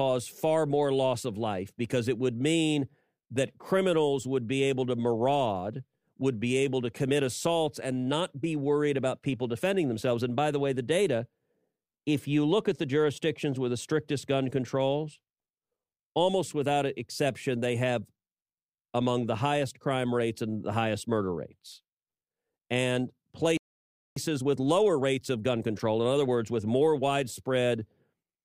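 At 23.57 s the speech cuts out mid-flow and stays silent until 24.16 s, a gap of about 0.59 s. This is a playback stall, likely caused by the player running out of buffered data or its output thread being blocked, so nothing reached the output.

From 24.16 s to 27.16 s the speech runs hurried at 1.1 times normal speed with unchanged pitch. This is time-compressed catch-up: the player trims the backlog from the stall by removing small slices and cross-fading across the joins.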